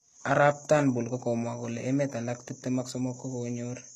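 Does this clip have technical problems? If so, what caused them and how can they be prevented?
Yes. Throughout the speech there is a sandy, metallic edge on the s sounds and a brittle sheen on the upper register, with nothing at all above about 12.4 kHz. This is likely HE-AAC compression. The codec keeps only the lower spectrum and fakes the treble by copying lower bands upward under a coarse envelope, so the top is bright but its harmonics don't line up. The damage fits a very low bitrate, around 16 kbps. Plain low-bitrate AAC or MP3 would sound dull and muffled at the top instead. To prevent it, encode at a higher bitrate with standard AAC or another full-band codec rather than band replication.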